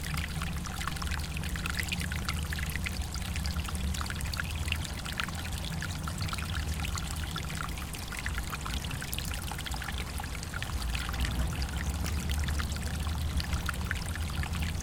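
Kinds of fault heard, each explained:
Damaged data in a compressed stream: corrupted bytes in the encoded file make the decoder misread a frame and lose sync until it finds the next valid header. Here it shows as three very brief blips, at 2.22 s, 8.08 s and 12.05 s, each only about 4 ms long. On a spectrogram each appears as a thin vertical break in the surrounding sound. The waveform shows a short, abrupt discontinuity at each point.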